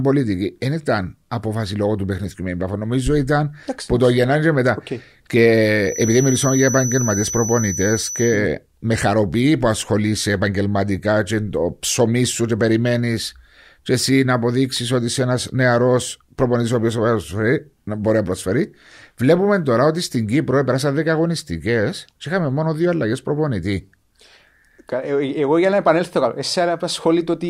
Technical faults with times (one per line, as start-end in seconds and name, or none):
5.80-8.43 feedback whistle